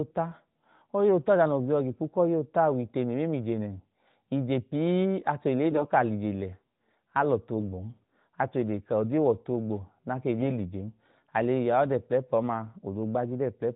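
From 5.70 to 5.91 s, just before "ka a", the speech turns hoarse and gargly: AMR bit errors. A few percent of the weakly protected bits in the AMR frames arrived flipped, so the excitation pulses land in the wrong places and the fine pitch, gain and spectral values drift, while pitch and level stay roughly intact. The stretch spans about ten 20 ms frames. On a spectrogram the harmonics in that window smear into ragged, noisy energy below the narrowband codec's 4 kHz ceiling, and the waveform looks jagged and irregular.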